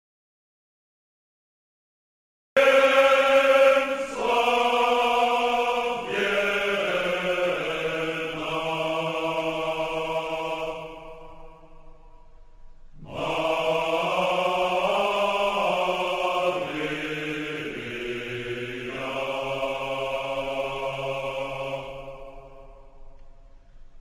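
From the start to 2.57 s there is an audio dropout to silence: silence without even room tone, already under way as the clip opens. The input was likely lost while writing continued, and the missing room tone separates it from a quiet passage or a fade.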